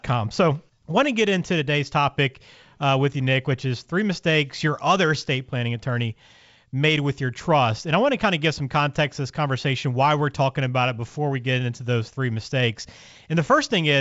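Nothing here calls for attention: it's a speech recording carried over G.722 wideband telephone coding at 64 kbit/s, and the audio sounds just as that path normally would, with nothing that needs pointing out.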